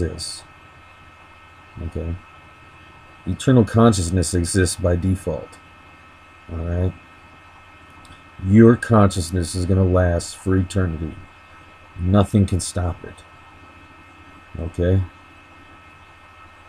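No technical faults can be heard anywhere in the audio.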